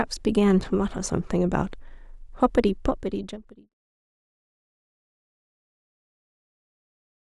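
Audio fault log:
Nothing to flag here; the speech just eases out gently from about two and a half seconds and is gone by 3.75 s.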